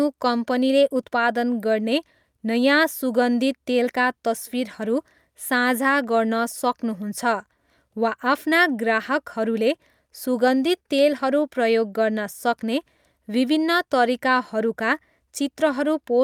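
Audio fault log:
No faults detected in this clip.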